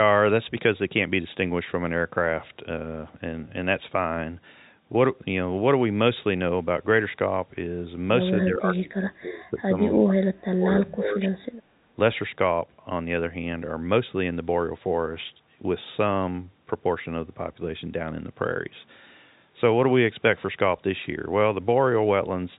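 From 8.44 to 9.75 s and again from 9.92 to 11.41 s, the echo canceller likely mistook the near talker for loudspeaker echo while both sides spoke at once, and turned everything down. This is speech suppressed in double talk. The voice dips by around 20 dB in the first stretch and around 30 dB in the second, with about a second of each span audibly pulled back or broken into pieces.

Just after, from 11.69 to 11.73 s, the canceller clamped the microphone while the loudspeaker played. This is background gated by the echo canceller. The room sound drops by about 10 dB for a brief 40 ms hole, then returns once the canceller releases. Through all of this, the G.711 telephone coding holds everything under 3.8 kHz.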